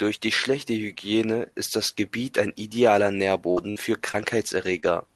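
Speech coming through a call codec that rolls off the top end around 12 kHz, with the usual coding grain, and it has two kinds of dropout. First, a burst of packet loss hits twice in quick succession right after "ein idealer", at 3.51 to 3.59 s and again at 3.71 to 3.78 s. In each case the receiver stretched the last bit of sound for about 50 ms, fading it into a held buzz or hiss, then jumped ahead, so roughly 60 ms of real audio is simply gone each time. Later you get two instances of short concealed packet loss, at 4.12 to 4.16 s and 4.80 to 4.84 s. These are much shorter holes, around 20 ms each, that the decoder papered over by extrapolating the preceding sound and cross-fading back in. They come across as a quick smear or wobble rather than an obvious gap.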